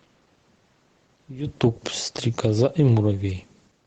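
Automatic gain falling, from 1.49 s to the end: the call's gain control judged the input too loud or its background noise too strong and began pulling its gain down gradually, so the speech slowly sinks in level, and the room noise behind it drops in step. That shared fade separates it from the natural level shift of the talker moving around 1.5 s, which changes only the voice. The audio stays band-limited to 8 kHz throughout, consistent with a wideband Opus call.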